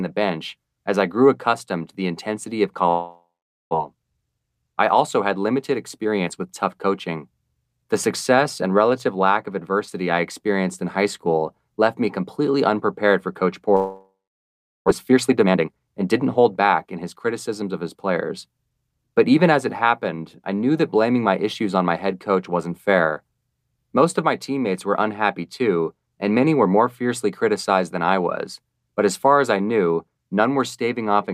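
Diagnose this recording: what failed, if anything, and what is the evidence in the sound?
At 2.89 to 3.75 s, after "to the intensity of", and again at 13.76 to 14.90 s, the sound smears into a fading buzz and then goes silent. About 0.6 s is lost each time. This is likely a long network dropout, concealed by the receiver.

A jitter buffer speed-up follows the gaps. Speech runs 15% fast from 3.97 to 4.63 s, before "I also had", and 8% fast from 5.71 to 6.87 s. From 14.91 to 18.11 s it runs 16% fast. Pitch holds. The receiver is trimming pitch periods to drain its backlog.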